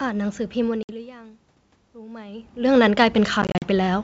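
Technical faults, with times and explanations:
0.83 to 0.90 s, packet loss on an ADPCM call: about 60 ms drops out to hard-edged silence, which points to a handful of lost packets. The decoder's predictor and step size lose track of the sender's, so the sound returns slightly distorted before settling.
1.93 to 3.99 s, automatic gain rising: the input falls by about 18 dB as the talker moves back around 2.0 s. The gain control responds by slowly adding about 7 dB, so the voice and the room noise swell together over roughly two seconds.
3.42 to 3.68 s, packet loss on an ADPCM call: about 120 ms goes missing in short gaps spread over 200 ms, the longest 40 ms, which suggests around ten lost packets. Each restart leaves the decoder briefly out of step, so the audio returns slightly distorted after each gap.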